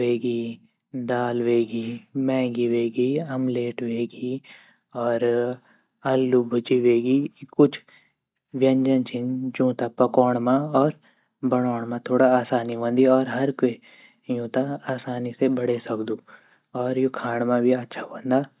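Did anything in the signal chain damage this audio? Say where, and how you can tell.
No, nothing along the way has left a mark on this speech that I can hear, so there's no stage to point a finger at.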